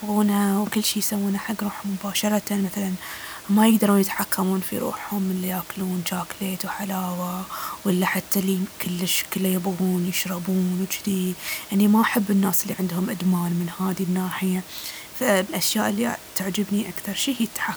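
No technical faults are audible.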